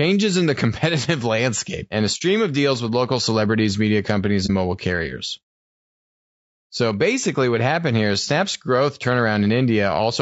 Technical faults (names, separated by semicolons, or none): low-delay AAC compression; AAC frame loss with muting